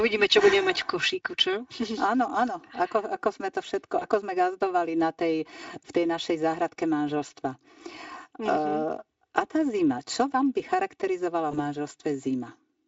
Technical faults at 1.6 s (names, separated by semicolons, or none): channel delay (comb filtering)